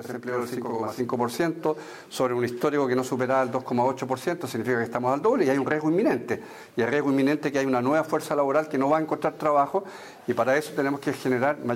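From 0.0 to 1.0 s, channel delay (doubling): one channel runs about 46.4 ms late, which fits a 2048-sample buffer, so the mono sum carries an equal-level slap echo.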